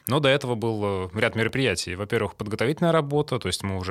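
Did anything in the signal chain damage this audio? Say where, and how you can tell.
Yes. A repeated buffer at 1.49 s in this speech clip points to a driver or buffer stage fault. New audio did not arrive at the output in time, so the device replayed its last block twice more. That piece is only about 1.3 ms long, which fits a 64-sample buffer. The three back-to-back copies, each with a hard join, are too short to hear as a stutter and come across as a brief click or buzz. No audio appears to be lost.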